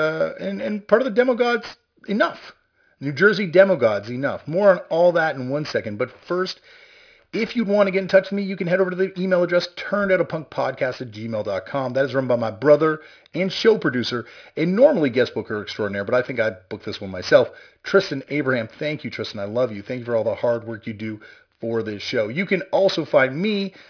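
Aliasing runs through the whole speech clip. The audio was resampled downward without a proper anti-alias filter. Content above 5.5 kHz folds back into the band, which points to a rate near 11 kHz. Sibilants turn gritty and metallic. The folded energy sits roughly 20 dB below the speech.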